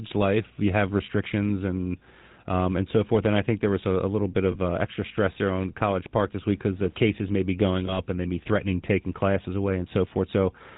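From start to finish the speech carries the rough, buzzy grain of the GSM full-rate codec, plainly audible and consistent with a 13 kbps full-rate stream. The codec rebuilds the voice from a vocal-tract model driven by a coarse, regularly spaced pulse excitation, which gives the gravelly texture. On a spectrogram everything stops at a flat ceiling at 4 kHz, and the harmonics below it look smeared and grainy rather than cleanly striated.

At 4.52 s, after "a little bit" and before "uh extra stress there", lost GSM frames leave a brief metallic ring lasting about 0.05 s. Again at 7.86 s, after "cases may be going" and before "and they may be", a similar ring runs about 0.11 s. Each fits a single lost frame, with the decoder repeating the last good frame's settings. A spectrogram shows a short horizontal smear of frozen harmonics instead of natural syllable movement.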